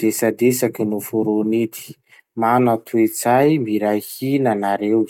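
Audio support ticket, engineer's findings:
No audible faults found.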